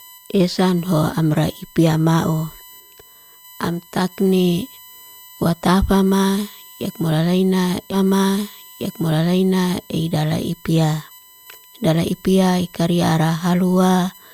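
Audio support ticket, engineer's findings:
USB whine throughout: fixed-pitch tone on a 1 kHz series, strongest at 13 kHz, roughly 25 dB below the speech. Spectrogram shows steady horizontal lines at 1 kHz multiples. Likely USB 1 ms frame current leaking into the audio path via power or ground.

Stream segment repeated at 7.91–9.91 s: 2 s of speech plays again, with a small blip at the jump back, ending just before "idala ipia". Waveform and spectrogram show identical 2 s blocks back to back, with a discontinuity at the seam. Player fetched or queued the same segment twice.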